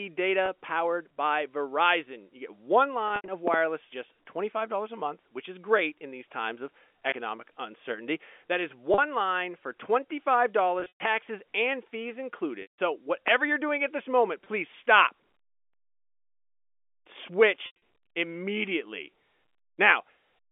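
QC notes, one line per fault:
0.46, 7.10 (after "in these times of"), 8.94 and 14.44 (after "doing at this moment"): packet loss with pitch repetition. These are brief drops of 20 ms, or 40 ms at 8.94. The receiver loops the last pitch period to fill each gap, so you hear a slightly held, buzzy smear rather than a hole.
3.08 to 3.28, 10.80 to 11.00 (just before "and fees"), 12.62 to 12.78 and 17.66 to 17.76: packet loss with pitch repetition, longer bursts. About 120 to 160 ms of audio goes missing in each, scattered, with runs up to 120 ms. The 12.62 drop is one solid 160 ms run. The repeated cycle fades out over roughly 50 ms into silence, then the speech cross-fades back in.
3.48 to 3.56: loud pop, a quick double pop about 20 dB above the speech. It's likely an electrical step from a switch, plug or static discharge, with the speech carrying on underneath.
13.28 to 13.30: loud pop, a single sharp click at a similar level, with the speech continuing beneath it.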